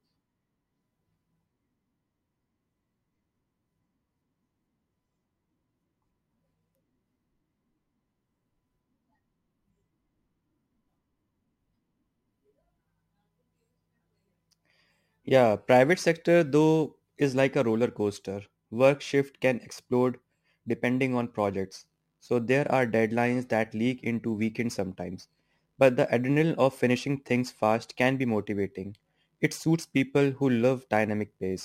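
From start to finish, crude rate conversion leaves a gritty, inharmonic fizz riding on the louder and brighter parts of the speech. The grit points to a 48 kHz to 44.1 kHz change done by picking the nearest sample with no filtering. The dropped samples fall in a repeating pattern, producing tones roughly 30 dB below the speech. Unlike steady hiss or quantisation noise, this fizz tracks the speech's loudness and high-frequency content and vanishes in quiet stretches.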